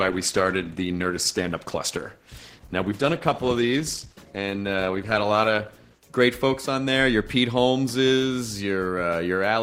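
From 0.0 to 6.0 s the adaptive stream is starting at a low bitrate: dull, band-limited sound with smeary codec artefacts, pointing to roughly 16 kbit/s Opus. At 6.0 s it steps up without a gap, and a spectrogram shows the treble band suddenly filling in.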